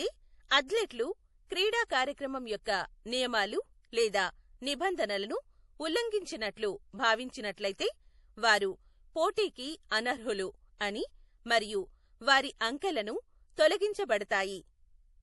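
Throughout the clip, heavy MP3 compression likely starved the encoder of bits, damage that fits a bitrate near 48 kbps. Nothing remains above 11.5 kHz, dulling the speech, while weak frequency lines flicker on and off, making it sound watery, with metallic chirps on s sounds.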